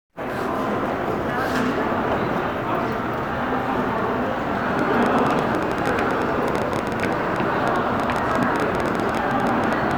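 A train of clicks runs from 4.79 to 9.92 s: about seventy similar pulses at roughly 11.5 per second, unevenly spaced and some 10 dB above the sound, likely interference from nearby equipment, heard as irregular ticking.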